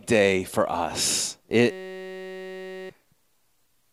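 From 1.71 to 2.90 s, right after "day for us", a system hang loop replaces about a second of audio. The host stalled while the hardware kept replaying one 5.33 ms slice, which fits a 256-sample buffer, producing a steady 188 Hz buzz.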